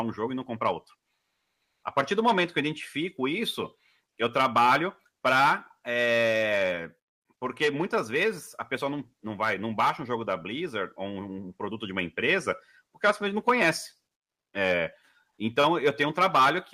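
From 1.21 to 1.83 s, comfort noise in place of the background takes over: the real background becomes a steady, featureless hiss about 11 dB quieter, likely from Opus discontinuous transmission. A spectrogram shows a smooth, uniform band; the waveform's floor visibly narrows.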